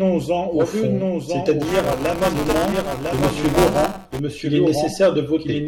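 A doubled audio track runs throughout the speech: a second full-band copy trails the original by about one second, roughly 5 dB quieter, with no decay or room colour. Two copies held out of step, likely from a second capture or an edit, would produce this.

Buffer tearing appears from 1.62 s to 4.19 s as a robotic buzz at 200 Hz that sounds only while speech is present. The buffer writer and reader cross within each period, so a small slice of every buffer repeats audio from about 10 ms earlier between hard joins. The buzz rate suggests a period of about 5 ms.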